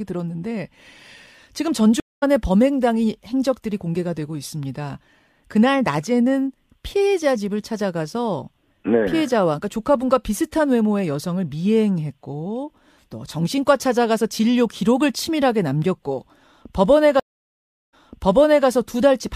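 Stream reconnects break this speech clip twice, at 2.00 to 2.23 s and at 17.20 to 18.67 s. Each time the connection drops, the audio goes silent, and a fresh decoder picks the stream up partway through. The first gap lasts 0.22 s and the speech resumes roughly a tenth of a second further on, so a sliver is skipped. The second gap lasts 0.73 s and playback restarts 0.74 s earlier, replaying material as the server resends a burst.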